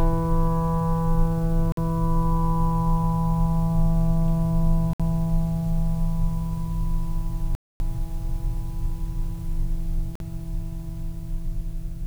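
The music drops to dead silence at 1.72 s, 4.93 s, 7.55 s and 10.15 s, for about 50, 60, 250 and 50 ms. These are likely Bluetooth stalls, where delayed packets emptied the headphone buffer. Waveform and spectrogram show flat, empty gaps before the music picks up again.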